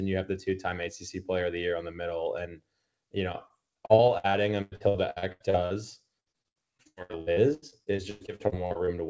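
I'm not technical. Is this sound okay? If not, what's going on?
No. Repeated packet loss (robotic sound) affects 3.3 to 5.7 s and 6.2 to 8.9 s. Many small pieces of the speech, each up to about a tenth of a second, went missing in transit. Each hole was papered over by stretching the previous sound, so the speech turns choppy and machine-like.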